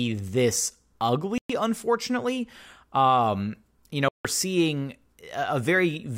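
At 1.38 s the speech cuts to silence for about 116 ms, resuming at 1.50 s. A second, longer gap runs from 4.08 to 4.25 s, about 162 ms. Both holes open and close abruptly or with a fade of a few milliseconds, and the speech picks up further along rather than where it stopped. The pattern is likely a Bluetooth dropout, where audio packets miss their delivery deadline to the headphones and are discarded, so the audio plays on unheard.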